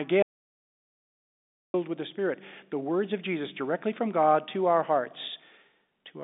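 At 0.23 s the speech cuts to complete silence, with no line hiss or room tone, and resumes at 1.74 s, losing 1.52 s. This audio dropout to silence is likely a lost input link while the recorder kept writing silence.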